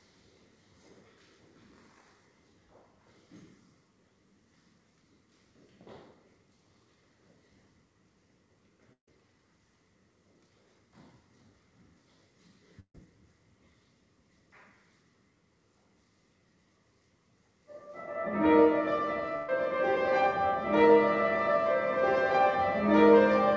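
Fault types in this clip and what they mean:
Burst of packet loss: at 8.93–9.08 s, 12.80–12.95 s and 19.36–19.49 s, runs of audio about 150, 140 and 120 ms long never arrive in time to play. The receiver stretches the last sound it had and fades it down. In the first two gaps that fill dies away into silence for about 110 and 90 ms, while the third stays filled throughout. Each time the sound picks up later, with the lost stretch skipped.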